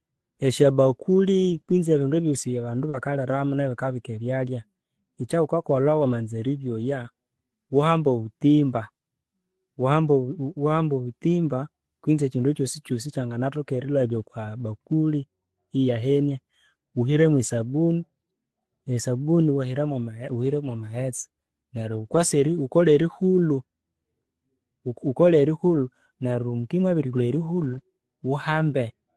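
Between 1.49 and 7.09 s come scattered short gaps: about three dropouts, the longest around 40 ms, patched by extending the preceding sound, leaving brief ticks and smears rather than silence. At 22.05–22.19 s and 25.75–25.77 s, a lost packet is rebuilt from error correction: no hole at all, just about 80 ms and then 20 ms of rougher, noisier sound from the decoder's low-bitrate backup copy.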